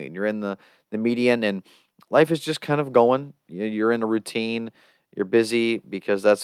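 No technical faults can be heard anywhere in this speech recording. There is nothing in the audio that calls for a time mark or further description.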